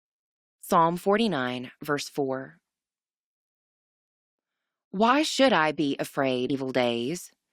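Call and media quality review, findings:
Short glitch in the speech at 6.49 s, very brief. Probable component: decoder input, with damaged data in the compressed stream. Corrupted bytes make the decoder misread the frame, lose sync and resync on the next header.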